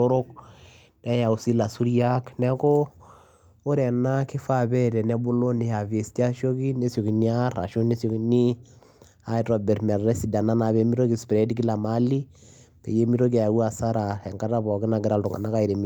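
No technical faults are audible.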